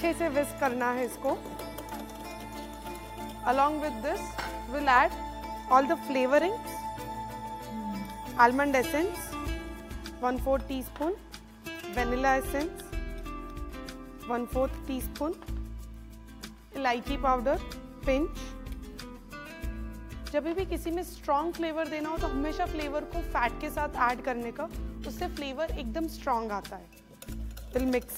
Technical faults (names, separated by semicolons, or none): dropped buffer (overrun)